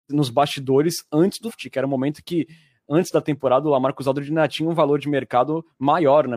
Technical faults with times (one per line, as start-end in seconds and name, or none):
1.44-1.52 damaged data in a compressed stream